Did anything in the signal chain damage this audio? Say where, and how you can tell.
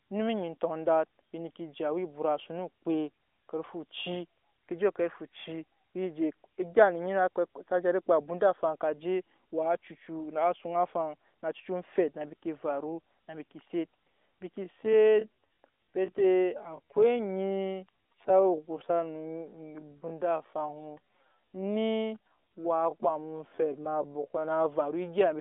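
Yes. From 14.60 s to 24.68 s the speech slows abruptly to about 0.65 times its original pace while the pitch stays put, the mark of a time-stretched section. The likely cause is software stretching the audio to fill a length by repeating short slices. On a waveform, syllables in that span are drawn out with repeated, near-identical cycles. On a spectrogram, harmonics keep their spacing but onsets blur and stretch horizontally. The narrowband mobile path, with nothing above 3.6 kHz, shows the same band limit throughout.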